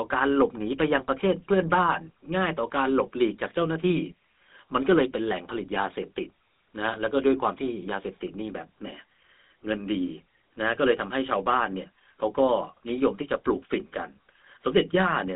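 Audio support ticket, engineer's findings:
Buzzy, gravelly roughness on the speech for the whole clip. GSM full-rate codec. Plainly audible damage. The vocal tract is modelled and driven by a coarse, regularly spaced pulse excitation, which grates on the voice. Band limited to roughly 150 Hz–3.7 kHz, nothing above 3.8 kHz. Sounds like a 13 kbps full-rate leg. Check the transcoding point.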